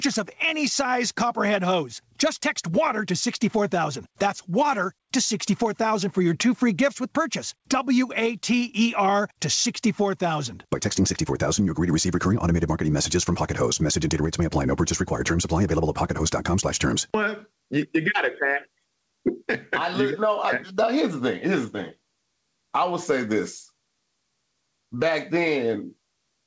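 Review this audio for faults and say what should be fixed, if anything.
Gain pumping runs through the whole clip, with the level swinging by something like 15 dB. Loud and quiet passages sit unnaturally close together and the sound feels squashed. The likely cause is input gain set far too high for the microphone, with a fast limiter or compressor clamping down on each peak and releasing in the pauses. Nothing is heard above 8 kHz, which fits a G.722 call codec at 64 kbps. To prevent the pumping, lower the microphone's input gain until peaks sit comfortably below full scale, and slow the limiter's attack and release or disable the automatic gain control.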